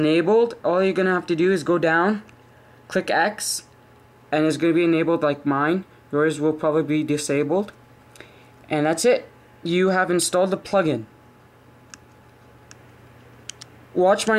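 A doubled audio track appears at 12.70 s and runs to the end of the clip: a second, full-band copy of the sound trails the original by roughly 700 ms, sitting around 5 dB lower. It cuts in abruptly, with no decay or room colouring, so it reads as a clean, unprocessed duplicate rather than an echo. The likely cause is the same signal being captured again through a slower path, or an edit leaving two offset copies mixed together.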